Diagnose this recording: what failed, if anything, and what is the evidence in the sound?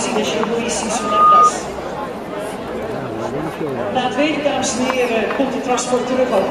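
Loudspeaker feedback squeal, analogue stage: from 0.92 to 1.53 s a 1.2 kHz tone swells within a third of a second to a bright horizontal spectrogram line, as loop gain exceeded one.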